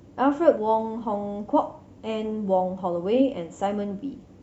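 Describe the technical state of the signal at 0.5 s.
Right at 0.5 s the speech is hit by damaged data in a compressed stream, running from 0.51 to 0.57 s. Corrupted bytes in that stretch leave the decoder unable to read its frames, so it loses sync and hunts for the next valid frame header. For those roughly 50 ms the signal gives way to a short chirp, squawk, click or hole.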